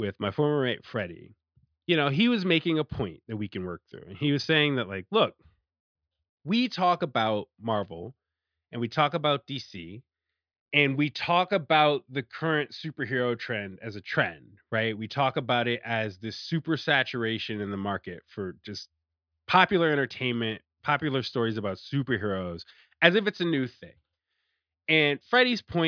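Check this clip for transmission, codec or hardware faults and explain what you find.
No transmission, codec or hardware faults.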